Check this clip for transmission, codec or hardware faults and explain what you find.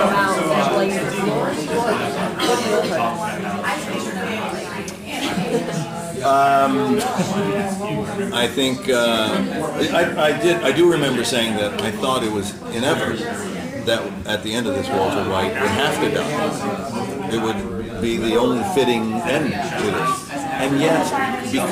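There is one hardware fault, present throughout the clip: sample clock jitter. The converter's clock wanders by roughly 7 microseconds, so each sample is taken at a slightly wrong moment. Steep, loud and bright passages gain a hiss-like roughness about 25 dB below the signal, and it vanishes in quiet gaps.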